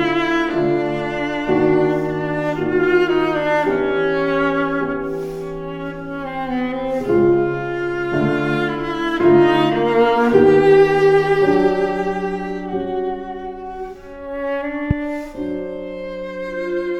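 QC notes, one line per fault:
14.91–14.93 s: loud pop, one sharp transient well above the surrounding level, likely a voltage pulse from a switch, plug or static discharge entering the signal chain.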